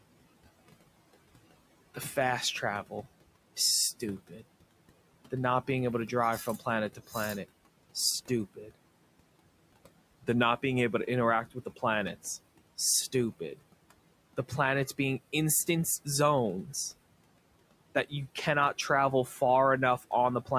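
Around 4.27 to 4.42 s the noise suppressor bites into the speech itself, mistaking a soft stretch for background and pulling it down by about 16 dB for roughly a tenth of a second, so that bit sounds swallowed. It does it again from 6.95 to 7.15 s, right after "to drive from planet", dipping about 13 dB for around 150 ms. The room noise, sitting about 20 dB under the speech, gets gated along with it.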